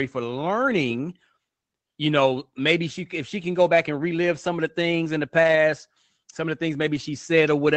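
At 3.75–3.77 s after "if she can go", 5.43–5.57 s after "the things in the", and 6.95–7.01 s after "some of the things", a lost packet rebuilt from error correction leaves brief rough, noisy stretches with no gap or dropout, which sets it apart from ordinary loss concealment.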